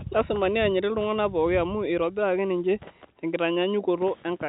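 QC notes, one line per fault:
The speech carries nothing above 3.8 kHz, as expected for a 64 kbps mu-law telephone channel, and no faults are heard.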